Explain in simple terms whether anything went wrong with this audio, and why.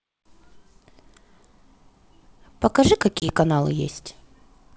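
Packet loss on an ADPCM call, 3.20 to 3.33 s: about one packet (20 ms) became silence, and the decoder briefly lost step, so sound returned unevenly.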